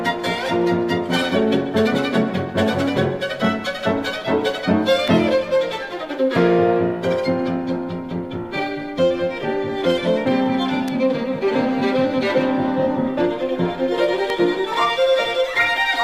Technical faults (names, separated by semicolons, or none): electrical switching spike